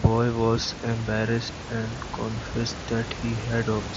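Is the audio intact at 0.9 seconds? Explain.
Yes, the audio is intact at 0.9 seconds, with no fault in the sound at that moment.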